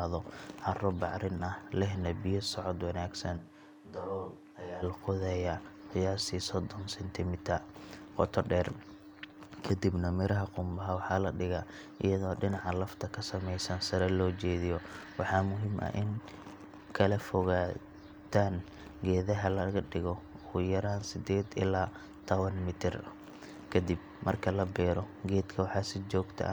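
A switch to a distant microphone occurs from 3.40 to 4.81 s. The speech turns abruptly roomy and hollow, thinner in the bass, and drops to roughly 10 dB quieter, with room noise rising to sit around 35 dB below the speech. The likely cause is that the close microphone's feed dropped out or went unused, so the recording fell back to a pickup further from the talker, then returned just as suddenly.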